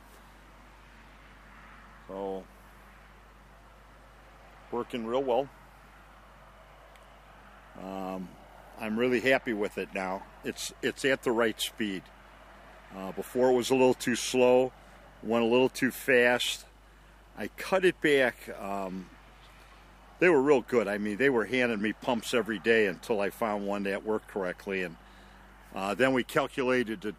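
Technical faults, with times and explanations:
Throughout, mains hum: a steady low tone at 50 Hz sits under the sound, roughly 30 dB below it, as power-line energy couples in through a ground loop or nearby transformer.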